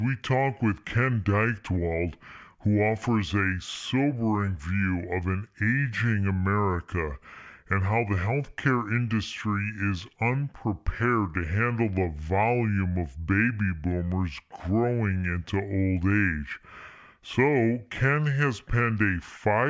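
From start to finish the speech runs at the wrong sample rate: the samples are clocked out more slowly than they were captured, with no conversion between the two rates. The result is a slowdown to two-thirds speed, with pitch dropped by about 7 semitones, close to a perfect fifth. That ratio fits a 24 kHz recording played back at 16 kHz. Voices come out low and sluggish, with stretched syllables and a deepened tone.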